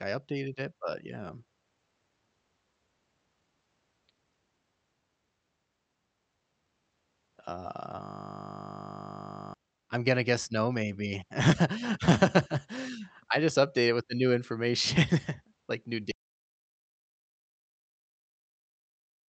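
In this speech clip, carried over an Opus call link, a steady 50 Hz buzz replaces the audio from 8.03 to 9.54 s, just before "I'm gonna guess no". This is a system hang loop: a frozen system left the hardware replaying one 20 ms buffer 75 times. After "like new", the sound cuts to dead silence with no room tone at 16.11 s and stays silent to the end, an audio dropout to silence, likely from the input being lost while zeros kept being written.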